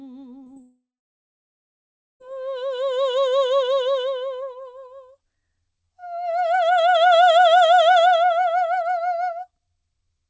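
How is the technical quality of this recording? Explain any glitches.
The recording has clear network damage early on: two brief concealed gaps and then a long dropout, all within the first 2.2 seconds. The music has no content above 8 kHz, which fits a wideband call codec such as G.722.

Short concealed packet loss occurs at 0.44–0.48 s and again at 0.54–0.58 s. Each time, about 20 ms of audio failed to reach the decoder in time. The receiver extrapolated from the preceding sound and then crossfaded back into the real signal, so each gap comes across as a tiny smear or wobble in the music. On a spectrogram, the harmonics briefly blur or flatten at those points. The waveform shows a short patch that is too regular instead of a hard gap.

A long network dropout follows at 0.62–2.22 s, roughly 1.6 s in which no real audio plays. The receiver first stretched the last sound into a fading buzz. 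For the remaining stretch of about 1.35 s, it left near-silence. The likely cause is a stall in packet delivery. The music then resumes with that section simply gone. A spectrogram shows a fading smear followed by an empty band, and the waveform collapses to a flat line before the signal returns.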